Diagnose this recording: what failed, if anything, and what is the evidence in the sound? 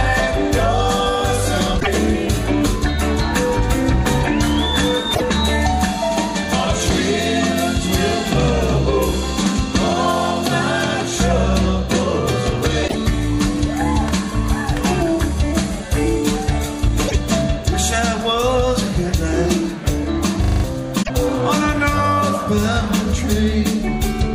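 At the codec stage, the compressed stream carries damaged data in five places: 1.77 to 1.88 s, 5.11 to 5.22 s, 12.84 to 12.95 s, 17.05 to 17.15 s and 20.99 to 21.10 s. Each event lasts about 110 ms and is heard as a short chirp or blip. Corrupted bytes made the decoder misread or reject those frames. It then lost sync and resumed at the next valid frame header.

At the driver and buffer stage, a system hang loop occurs from 20.44 to 20.64 s. The computer or driver stalled while the sound hardware kept replaying its ring buffer. A single 40 ms slice of audio repeats five times, producing a rapid stutter that buzzes at a 25 Hz loop rate. That period fits a small buffer. New audio for about a fifth of a second is replaced by the repeats.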